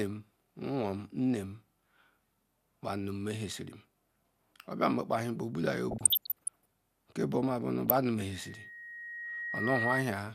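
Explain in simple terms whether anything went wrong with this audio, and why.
Two things go wrong in this speech. First, there's DAB burbling from 5.91 to 6.66 s and again briefly at 7.86 to 7.97 s. The digital radio signal was weak enough that errors slipped past the error correction and corrupted the compressed audio, so individual frequency bands jump up and down in level. You hear it as bubbly blips of noise over the voice instead of clean sound.

Then, from 8.31 s to 10.04 s, there's a loudspeaker feedback squeal. A microphone was picking up the speaker it was feeding, and at one pitch, around 1.9 kHz, the sound kept going round the loop and getting louder each time. It swells over roughly a second and a half into a piercing whistle that ends up louder than the speech itself, before it stops.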